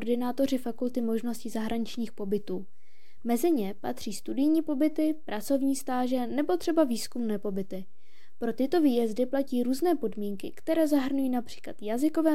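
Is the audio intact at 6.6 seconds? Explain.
No, not strictly. At 6.6 seconds the DC offset is there, just as it is across the entire clip. The whole waveform sits shifted off the zero line by a fixed amount, about -34 dBFS. You won't hear it as such; it's a constant, not a tone. But it eats into the headroom and shows up as a steady lump of energy right at the bottom of the spectrum.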